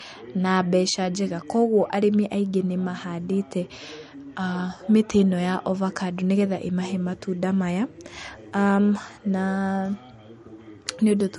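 Speech, and across the whole clip there's nothing above about 11.2 kHz, so the top end sounds dull, the mark of heavy MP3 compression. The likely story is low-bitrate audio saved at a high bitrate: a lean MP3 encode, something around 48 kbit/s by the sound of that cut-off, later re-saved as a much fatter MP3. The big file can't bring back what the first pass threw away.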